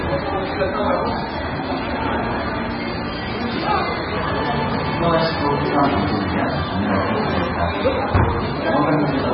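From start to finish, nothing sounds above about 5.5 kHz. The top end is simply gone. Weak detail flickers in and out, giving a watery, swirly texture. Attacks smear. This is likely heavy MP3 compression, at a bitrate near 16 kbps.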